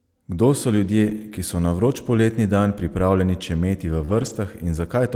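From 1.05 to 1.23 s the speech turns rough and noisy but never breaks. This is a lost packet rebuilt from error correction: roughly 100 ms of lost packets were replaced by the low-bitrate copies carried in the packets that followed. Unlike concealment, the lost audio is not invented from the preceding sound, so the sound keeps its shape while losing fidelity.

At 4.05 to 4.10 s a short concealed packet loss causes a brief smear. About 20 ms never arrived, and the decoder extended the preceding sound to fill it. Straight afterwards, from 4.10 to 4.36 s, error correction rebuilds about 140 ms in the same grainy, degraded way as before.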